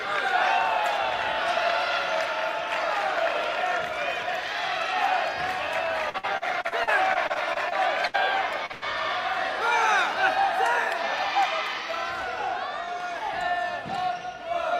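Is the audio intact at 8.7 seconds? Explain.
No. A short concealed packet loss at 8.66 to 8.72 s loses about 40 ms; the receiver fills it by extending the preceding sound, leaving a brief smear. A burst of packet loss follows at 8.72 to 8.84 s: about 100 ms never arrives, is bridged by a fading continuation, and the sound resumes further on with that stretch missing.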